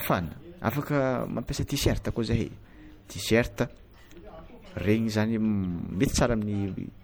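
From start to finish, the speech carries a watery, swirling coloration, and s sounds chirp metallically. This is likely MP3 compression starved of bits, dropping treble and weak detail frame by frame. The damage fits a bitrate near 64 kbps.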